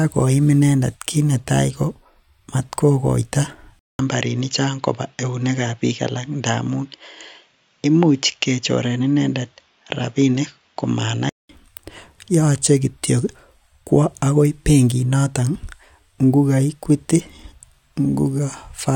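At 3.79 s the speech cuts out for about 200 ms, then returns dull and boxy, with nothing above 7.3 kHz and a faint new background noise roughly 50 dB below the voice. Loudness stays about the same. This points to the input likely having switched to a poorer device, a different microphone or headset path with a narrower band and its own tone and noise. At 11.49 s the full, brighter sound returns.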